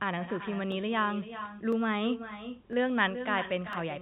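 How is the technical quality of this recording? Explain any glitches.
The recording is let down by a far-end echo and a regular ticking. Both come from the call path, not the talker's microphone.

Echo with no canceller is present throughout: each phrase returns about 10 dB quieter after roughly 400 ms, and thinner. It is a loudspeaker-to-microphone loop with nothing removing it, distinct from room reverb, which decays smoothly rather than repeating discretely.

Clock drift buffer slips appear as clicks once per second from 0.72 s to 3.73 s. The likely cause is two clocks differing by around 300 ppm, forcing a small block of samples to be dropped or repeated. The fixed one-second spacing separates them from random packet-loss glitches.

The narrow telephone band fits G.711 coding working as expected.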